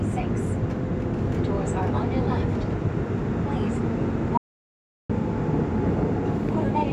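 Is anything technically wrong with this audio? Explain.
Yes. There is an audio dropout to silence from 4.38 to 5.10 s. The sound cuts off abruptly. About 0.72 s of silence follows, with no background tone at all. The likely cause is a briefly lost input while recording continued writing silence.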